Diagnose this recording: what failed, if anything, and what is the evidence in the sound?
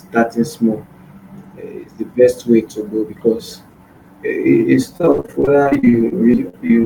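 Repeated packet loss (robotic sound), 4.97 to 6.85 s, network stage: about twenty gaps up to 75 ms, patched by extending prior sound, make the speech choppy and robotic.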